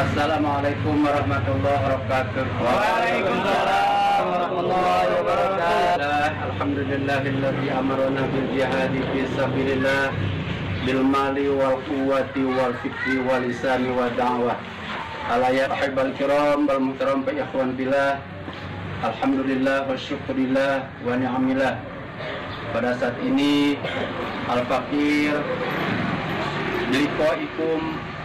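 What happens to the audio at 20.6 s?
Nothing goes wrong at 20.6 s: the audio runs through that moment intact, with no dropout, click or other fault.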